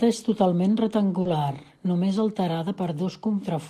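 Just after "és totalment", from 1.21 to 1.27 s, short concealed packet loss: about 40 ms never arrived and was filled by extending the preceding sound. It is a brief smear. At 1.25 to 1.27 s, a lost packet rebuilt from error correction plays a 20 ms low-bitrate copy, heard as a rougher, noisier grain, with a grainier patch in the spectrogram.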